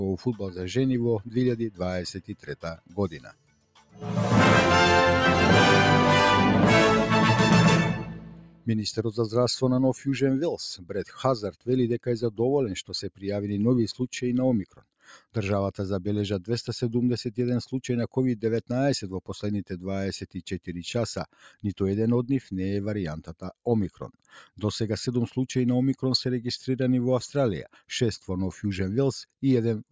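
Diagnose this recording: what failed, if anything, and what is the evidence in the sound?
The failure is at the call-processing stage: a noise suppressor applied to music or sounds. A speech-tuned suppressor was left running, so it treats sustained tones, ambience and reverb tails as noise. Its gain swings by around 5 dB as it decides what to keep, and the sound pumps and thins. On a waveform the envelope breathes after each attack. On a spectrogram, sustained partials and decays look patchy and eroded rather than smooth. The call path's band limit, with nothing above 8 kHz, also shows as a clean ceiling.

The worst moments are sounds cut by the noise suppressor, with the level dropping by about 12 dB at its deepest. This happens at 2.17–4.02 s (the longest stretch, roughly one and a half seconds), 7.93–8.68 s, 10.77–10.93 s, 12.86–13.25 s and 14.64–14.85 s. Steady or fading material sinks, and tails end early, while transients survive. 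The waveform shows the envelope collapsing mid-sustain. The spectrogram shows sudden dark patches across the held energy.

At 17.71 s there is a bit error spike: a single sample flipped in memory or on a digital link, not an analogue or codec fault. It sounds like one sharp tick unrelated to the signal around it. The waveform shows a lone vertical needle that jumps and returns within one sample. The spectrogram shows a thin broadband vertical line running through every frequency.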